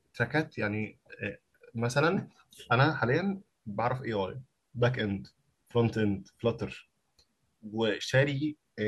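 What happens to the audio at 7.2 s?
Nothing goes wrong at 7.2 s; the speech carries on intact through that moment, with no dropout, click, distortion or other fault.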